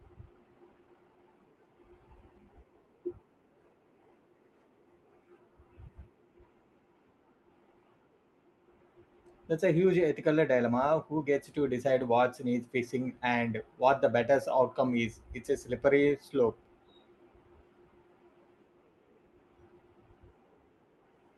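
A jitter buffer speed-up runs from 0.66 to 2.46 s. The receiver, holding more buffered audio than it targets, repeatedly cut out short pitch-period slices, about a third of a second in total. The speech plays at 113% speed with unchanged pitch and sounds hurried.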